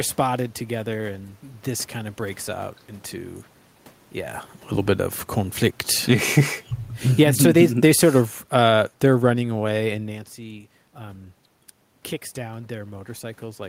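Around 5.95 s the automatic gain falls, pulling the level down by about 4 dB over roughly a third of a second, until 6.26 s. The control has decided the input is too loud, or its background too noisy, and is backing off. Almost straight away, from 6.18 to 6.64 s, the automatic gain rises again by about 3 dB, so the speech dips and then swells back. The giveaway is that the room noise sinks and lifts right along with the speech. A real change in how loud the talker is wouldn't drag the background with it.

The bigger move comes from 7.04 to 10.05 s, a slow automatic gain fall of about 8 dB stretched over three seconds. Tangled inside it, from 7.36 to 8.24 s, is another automatic gain rise of about 3 dB. That briefly pushes against the downward drift, so the level wobbles before it carries on sinking. The room tone follows the whole time, which separates this from the natural level shifts where the talker moves around 4 s and 10 s.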